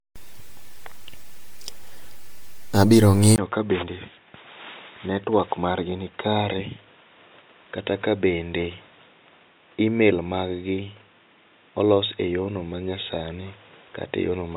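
From the start, the speech sounds swirly, smeared and hollow, and consonant attacks blur. That points to generation loss. The likely cause is about four rounds of MP3 coding near 96 kbit/s, each pass adding fresh quantisation noise and spectral holes.

At 3.36 s there is a 20 ms gap. After it, nothing reaches above 3.8 kHz, so the sound turns dull and boxy. The level drops by about 5 dB, and a new noise floor sits about 35 dB down. This is likely an input switched to a poorer device.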